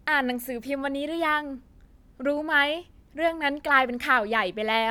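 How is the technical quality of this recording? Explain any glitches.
No technical glitches can be heard in this recording. The speech runs without any audible fault, so there is nothing to explain.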